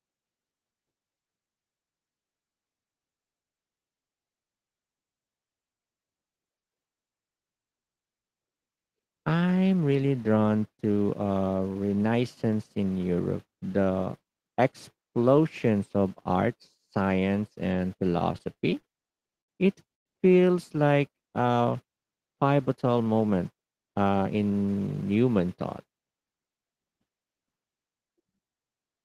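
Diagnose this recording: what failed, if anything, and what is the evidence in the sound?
Packets reached the receiver late and slower than playback, so the jitter buffer kept emptying. From 18.19 to 19.50 s there are repeated stalls (stutter): fourteen short gaps, the longest 73 ms, filled by continuing the last sound, about 250 ms in all. The speech drags and judders.

At 19.94 to 20.08 s there is a call audio freeze. The sound holds briefly and then drops to near silence for about 110 ms before resuming where it left off. This is likely a network delay that drained the jitter buffer, adding a gap without losing any speech.

At 22.69 to 23.07 s there is a jitter buffer speed-up. The receiver trimmed its excess buffered audio by cutting short pitch-period pieces, roughly 50 ms in total. Speech plays at about 112% speed with unchanged pitch and sounds briefly hurried.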